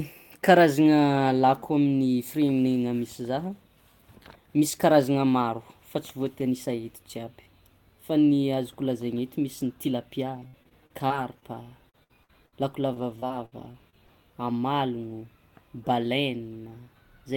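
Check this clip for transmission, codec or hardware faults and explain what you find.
The speech carries repeated packet loss (robotic sound) in two stretches, 10.35–11.44 s and 11.90–14.10 s. Short holes, none longer than about 60 ms, are patched by extending the preceding sound, producing choppy speech with pieces missing. Spectrograms show smeared, flattened harmonics; waveforms show brief repeated cycles.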